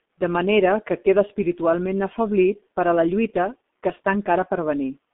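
Throughout the speech, a G.723.1 codec working at low bitrate, consistent with roughly 6 kbit/s, strips everything above 3.8 kHz and tracks the voice coarsely in 30 ms frames. The result is muffled, hoarse speech confined to about 200 Hz to 3.5 kHz, with consonants heavily smeared.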